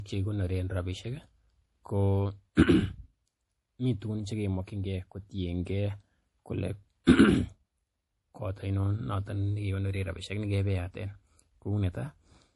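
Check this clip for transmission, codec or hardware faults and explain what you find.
There is one codec fault, present throughout the speech: low-bitrate audio saved at a high bitrate. Everything above about 11.5 kHz is missing, and a spectrogram shows a flat, hard ceiling there across the whole clip. The cause is likely an earlier low-bitrate MP3 pass, re-encoded at a much higher rate. That second encode kept the first one's cut-off and its artefacts, since raising the bitrate cannot restore discarded detail.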